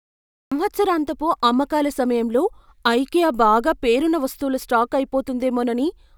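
A cut-off start: digital silence runs to 0.52 s, then speech enters mid-sound with no attack, because capture began late, unlike a slow fade-in or gated onset.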